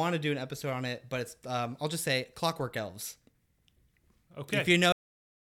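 At 4.92 s the speech ends abruptly in a cut-off end: the final buffers were never written out, so the audio stops partway through a sound and falls straight to digital silence with no natural decay, staying silent for the last 0.49 s.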